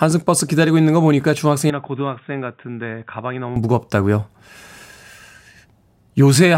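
Input switched to a poorer device, from 1.70 to 3.56 s: the speech abruptly turns duller and about 10 dB quieter, with nothing above 3.8 kHz and a faint new noise floor, with no gap at the switch. The likely cause is a change of microphone or headset profile mid-recording.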